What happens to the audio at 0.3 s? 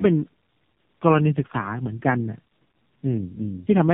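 At 0.3 s the speech sounds rough, muffled and warbly, with nothing above about 3.8 kHz, and this continues through the whole clip rather than starting there. The cause is tandem speech coding. The sound points to two low-rate speech codecs in a row, likely G.729A followed by AMR-NB with a G.711 link between them. The second coder had to re-encode output the first had already degraded, so their artefacts stack up.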